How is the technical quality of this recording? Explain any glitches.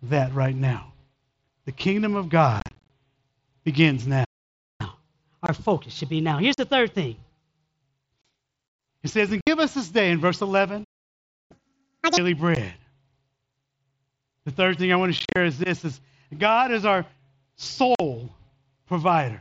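The recording is speech that is repeatedly disrupted: it has dropouts from Bluetooth headset packet loss, two playback stalls, and a sped-up catch-up after each stall. All of it passes through an mSBC wideband headset link, so the spectrogram stops at 8 kHz throughout.

Unconcealed Bluetooth headset packet loss occurs at 2.60–2.89 s (right after "kingdom of"), 5.46 s, 6.54 s, 8.22 s, 9.41 s (just before "us this day in"), 12.55 s, 15.18–15.36 s and 17.95 s. Lost packets between headset and phone were never filled in, so the audio simply drops out for 15 to 60 ms at a time. At 2.60 s and 15.18 s, runs of up to about 38 ms are scattered across roughly 300 ms and 180 ms, which sounds like choppy crackle. The waveform shows flat gaps with hard edges, and the spectrogram shows thin vertical blank slots.

Playback stalls occur at 4.24–4.81 s and 10.84–11.51 s, the second right after "this day in verse". 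The sound halts in mid-flow for about 0.55 s and then about 0.66 s. The likely cause is that the player ran out of buffered data or its thread was held up. Both the waveform and the spectrogram show a clean band of total silence, longer than any of the packet-loss gaps.

Catch-up at higher speed follows each stall as the player works through its backlog by resampling. From 4.81 to 7.81 s it runs 1.15 times fast, raising the pitch by about two semitones. From 11.51 to 12.17 s it runs at double speed, which pushes the pitch up by nearly an octave and sounds chipmunk-like. On a spectrogram, the harmonics and formants shift upward and the syllables compress in time until playback returns to normal speed.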